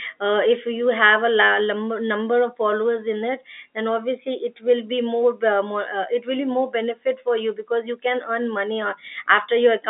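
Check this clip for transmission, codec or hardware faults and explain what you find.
Nothing here points to a transmission, codec or hardware fault; the speech comes across as ordinary G.711 telephone audio, sitting in a line band of roughly 200 Hz to 3.6 kHz with nothing above about 3.8 kHz, which is just how a normal phone line sounds.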